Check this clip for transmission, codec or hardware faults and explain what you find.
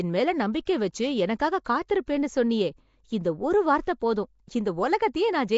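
Two codec faults are audible in this speech clip.

Nellymoser compression runs throughout. The speech has a rough, hissy halo and a smeared, underwater tone, with nothing above 7.7 kHz. The likely cause is Nellymoser Asao coding at a fixed low bit budget, which fits a 32 kbps stream. Weak bands get no bits and are replaced with noise.

Pre-echo occurs at 2.06 s, just before "சொன்னியே இந்த ஒரு வார்த்த". A brief hiss of about 15 ms leads into the attack, which sounds soft. The codec spread its block's quantisation noise evenly, so noise sized for the loud onset filled the quiet moment before it.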